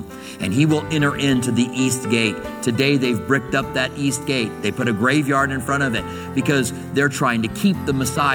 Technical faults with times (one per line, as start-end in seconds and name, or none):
none